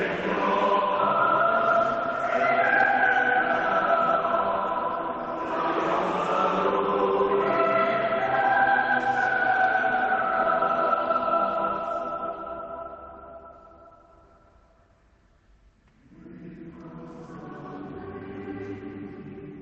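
No faults are audible; the sound has passed through a call link whose Opus coding band-limits it to about 8 kHz, and nothing in the signal marks a failure of that path.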